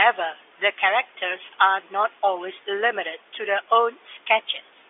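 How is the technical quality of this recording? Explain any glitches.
There are no glitches to explain in this recording. It has the narrow sound of G.711 telephone coding, with the speech held to the 300 Hz to 3.5 kHz line band and nothing coming through above 3.7 kHz.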